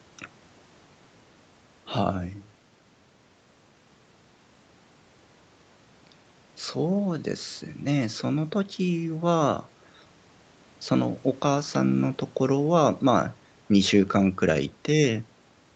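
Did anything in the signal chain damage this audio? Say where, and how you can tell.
No, nothing damaged it.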